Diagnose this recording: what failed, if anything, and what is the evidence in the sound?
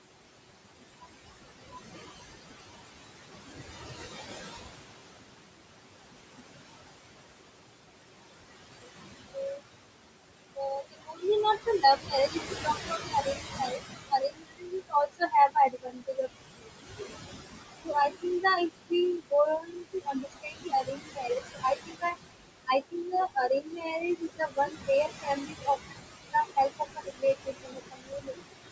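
The failure sits in call processing: noise suppressor artifacts run through the whole clip. The room noise, about 8 dB under the speech, is pulled down by about 21 dB in the gaps and swells back beneath speech. A codec fault would instead smear the speech itself.

Speech cut by the noise suppressor appears at 8.82 to 9.61 s, 10.55 to 17.04 s and 17.84 to 28.42 s. Quiet stretches of speech, roughly 0.1 s, 3 s and 4 s in total, drop by up to about 22 dB. This is gating rather than dropout, since the faint speech stays continuous and is not silenced.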